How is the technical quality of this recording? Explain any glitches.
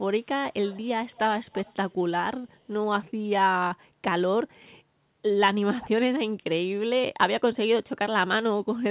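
The speech has a faint echo leak near the start, heard through a telephone-band call path with nothing above 4 kHz. The echo leak at 0.65–0.88 s, 1.11–1.19 s and 1.35–1.94 s is likely loudspeaker sound the far end's canceller missed, returning about 250 ms late as a faint copy roughly 25–30 dB down.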